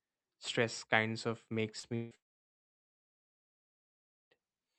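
At 1.79 s, just after "kinds of", a short concealed packet loss occurs. About 40 ms of the call's audio failed to reach the decoder in time, so the receiver extended the preceding sound to cover the gap and then blended back into the real signal. This produces a brief smear lasting a few hundredths of a second over the speech, through a band limited to 8 kHz by the Opus codec.

Shortly afterwards the stream breaks down twice, likely from a long network dropout. From 1.95 to 2.14 s, about 160 ms of audio is missing. Concealment fills the entire gap, so this stretch is a synthetic continuation of the last sound rather than the real speech. From 2.15 to 4.33 s, about 2.2 s is lost. After only a short trace of that continued sound, playback falls to silence for about 2.1 s, and the speech resumes without the missing portion.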